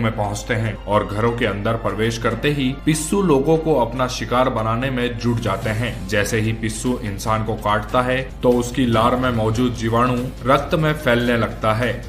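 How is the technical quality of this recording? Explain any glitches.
No glitches or technical faults can be heard here.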